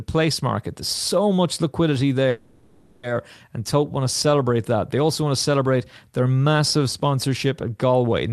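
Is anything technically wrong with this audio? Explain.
Yes. From 2.29 to 3.05 s there is a call audio freeze, most likely from packets held up so the jitter buffer ran empty. The last sound is stretched into a fading buzz for about 0.74 s, then the speech resumes exactly where it stopped. Unlike a dropout, nothing is skipped; the speech simply runs later from that point on.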